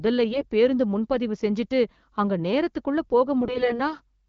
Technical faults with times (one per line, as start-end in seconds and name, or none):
0.32-0.46 AMR bit errors
3.41-3.93 AMR bit errors